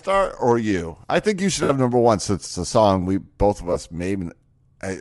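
All the way through, the speech carries a breathy, grainy edge on its upper range, plainly audible, and that points to likely Bluetooth LC3 compression, the LE Audio transform codec. The texture fits short 7.5 ms frames at something around 48 kbps. At that rate the encoder zeroes a good chunk of the upper spectrum and the decoder fills those gaps with noise. That's where the grain comes from.

Then there are two spots with lost LE Audio frames. The first runs from 1.63 to 1.70 s, right after "I think you should" and before "number one since it's". The gap is 60 ms, which fits about eight 7.5 ms frames. The second runs from 3.73 to 3.76 s, just after "song we both of", and lasts 30 ms, roughly four frames. In both, the decoder patches the hole by reusing the last good spectrum with random signs. So instead of a clean dropout you hear a short noisy smear where the speech should be.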